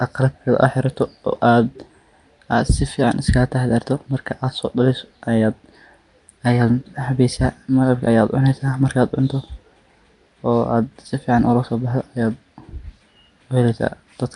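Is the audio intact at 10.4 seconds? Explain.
No. At 10.4 seconds, as throughout, the speech carries a rough, hissy halo and a smeared, underwater quality, likely from Nellymoser compression at a rate fitting about 44 kbps, with weak bands replaced by noise. A spectrogram shows speckled noise fill and nothing above 10.6 kHz.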